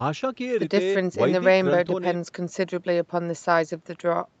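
No technical faults can be heard in this speech.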